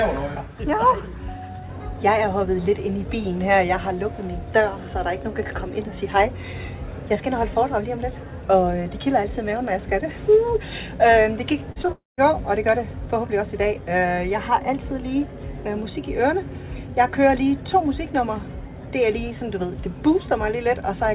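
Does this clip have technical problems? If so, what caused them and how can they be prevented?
Yes. Short concealed packet loss occurs at 11.72–11.78 s, 11.82–11.86 s and 11.86–11.90 s. Each gap of 20–40 ms was bridged by extending the previous sound, leaving brief smears. Adding forward error correction or redundancy would let the receiver rebuild these lost packets.

A long network dropout follows from 11.92 to 12.20 s, likely caused by a network interruption. The extended sound fades, leaving about 0.18 s of silence before the audio resumes with that portion gone. A more stable connection, such as wired rather than wireless with less competing traffic, would prevent this.

The band limit at 4 kHz fits the 64 kbps G.711 call path.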